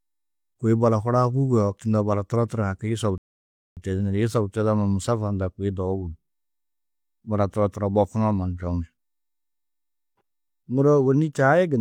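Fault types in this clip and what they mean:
Rebuffering stall: playback ran out of downloaded audio, so the speech stops dead into silence from 3.18 to 3.77 s, then resumes exactly where it halted. Unlike a dropout, nothing is skipped. The pause simply adds 0.59 s.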